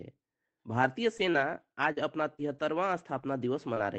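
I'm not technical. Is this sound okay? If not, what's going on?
No. Between about 1.03 and 3.78 seconds, the speech has scattered short gaps, roughly seven of them. Each one is brief; the longest lasts about 40 milliseconds. The sound came over an internet call. Some small pieces of it arrived late or never arrived. The receiving end covered each hole by stretching the last bit of sound it had. Together these patches fill only a small share of that stretch.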